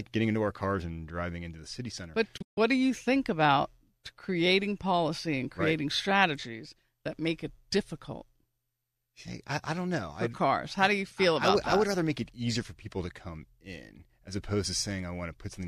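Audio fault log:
2.37–2.58 s: digital broadcast dropout. Speech fades out within 8 ms and drops into short silent holes, the longest 144 ms. The receiver muted failed frames, losing that audio.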